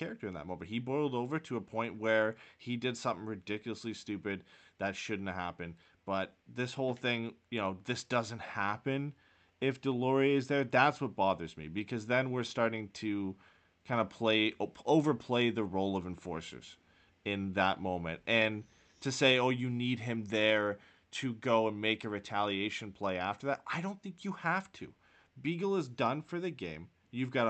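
No technical faults are audible.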